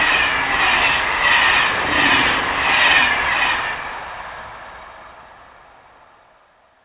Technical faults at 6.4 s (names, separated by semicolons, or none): none